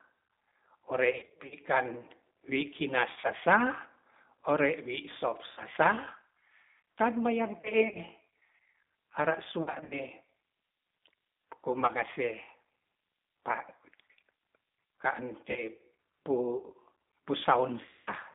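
Throughout, the speech carries plainly audible G.729 codec damage at about 8 kbit/s. Pulse-based resynthesis leaves it rough and slightly synthetic, and a spectrogram shows the band confined to roughly 200 Hz to 3.7 kHz, with nothing above.

VoIP packet loss concealed by the speech codec strikes at 1.13–1.55, 3.12–3.33, 5.48–5.62, 7.61–7.99, 9.61–9.99, 11.73–11.92, 15.51–15.65 and 17.86–18.10 s. In each stretch the decoder repeats its last pitch and filter, so the sound smears into a fading buzzy tone or coloured noise. Gaps total up to 230 ms, as at 1.13 s, where the longest run lasts 70 ms. On a spectrogram these appear as flat, repeated harmonic stripes that dim, and on the waveform as a steadily shrinking periodic envelope.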